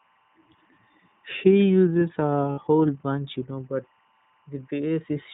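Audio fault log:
throughout: timecode bleed. A faint chirping warble sits behind the speech, about 40 dB below it, flipping between two pitches near 1 and 2 kHz. Linear timecode from an adjacent track or cable is leaking in, and its square wave switches frequency as the bits change. The rhythm fits 23.976 fps code. Unlike a steady whine or mains hum, the pitch never holds still. It keeps a regular, data-like flutter.
throughout: iLBC codec. The speech is confined below 4 kHz and sounds clear but rough and slightly synthetic, with the coding damage plainly audible. Each 30 ms frame's excitation is coded on its own, without drawing on the previous frame. The roughness and narrow band point to iLBC at about 13.33 kbps.
2.52–2.59 s: lost iLBC frames. Just before "bunch you know but", a 60 ms stretch turns into a held, slightly buzzy, breathy vowel. The decoder had no data, so it repeated the last pitch cycle mixed with noise, which fits two lost 30 ms frames. 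This is not a silent dropout or a click. The gap is filled with a steady synthetic tone. Because the frames stand alone, the voice comes back cleanly almost immediately after.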